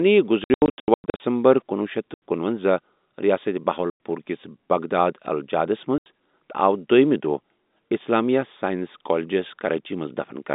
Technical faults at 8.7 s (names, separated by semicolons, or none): none